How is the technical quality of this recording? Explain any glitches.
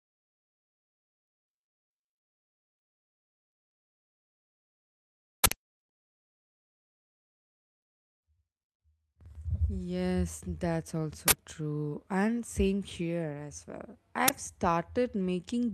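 The speech recording has three uninitialised buffer glitches: 5.44–5.52 s (80 ms), 11.28–11.32 s (40 ms) and 14.28–14.30 s (20 ms). In each case a block of audio reached the output before any samples had been written into it, so whatever data remained in that memory was played as sound. That leftover data is unrelated to the speech, so each event is heard as an abrupt, loud crack or burst of digital noise cutting across the audio.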